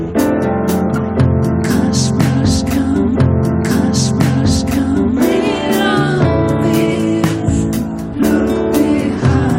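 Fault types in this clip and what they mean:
Stream segment repeated: the player queued the same stretch of audio twice, so about 2.0 s plays again from 3.14 s to 5.15 s, with a small blip at the jump back. On a spectrogram or waveform, that block appears as an identical copy, with a brief discontinuity where it restarts.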